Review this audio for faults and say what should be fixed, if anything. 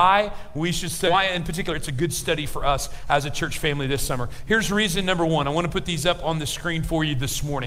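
At about 1.07 to 1.09 s there's a skip ahead: playback jumps forward with no fill, so roughly a second of audio just isn't there and the two sides are butted almost straight together. That happens when a chunk is dropped in transit or tossed by the jitter buffer on overflow while later audio is already queued. To prevent it, size the jitter buffer so bursts don't overflow it, and conceal or fade across losses rather than splicing hard.

Right after, from about 1.13 to 5.94 s, there's a jitter buffer speed-up. The buffer was holding more audio than its target, probably after delayed packets landed in a burst, so the receiver kept trimming tiny pitch-period-sized slices to drain it. Pitch stays put but everything runs about 109% speed for nearly five seconds, roughly 400 ms shaved off in total, which sounds hurried. To prevent it, drain excess buffer more gently or spread the catch-up over longer, quieter stretches.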